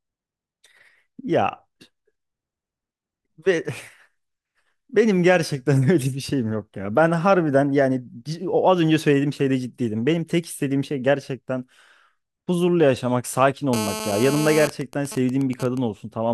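From 13.73 s to 14.64 s a hard, raspy buzz at 217 Hz sits over the speech, dense with harmonics and unrelated to anything being said, only about 8 dB below the speech level. This is GSM phone buzz: a nearby 2G phone in an active call is transmitting bursts 217 times a second, and the audio circuitry is rectifying those radio pulses into a steady audible tone.

At 14.64 s the steady buzz gives way to even ticks with a longer 217 Hz buzz twice a second that runs until 15.78 s, somewhere around 10 dB under the speech. These are GSM signalling bursts. The same phone is still on its call, but its user has gone quiet, so it sends only short groups of bursts instead of a continuous stream. The circuitry rectifies those groups into this broken, rhythmic pattern.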